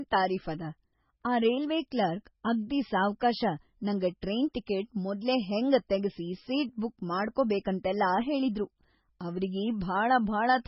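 Throughout the whole clip the speech sounds watery and swirly, with a metallic, chirping edge on s sounds and softened, smeared onsets, and nothing at all comes through above 5.6 kHz, so the top end is dull and closed in. This is likely heavy MP3 compression, at a level that fits a very low bitrate around 16 kbps: starved of bits, the encoder cut the treble at a fixed point and dropped weak frequency lines that flicker on and off between frames.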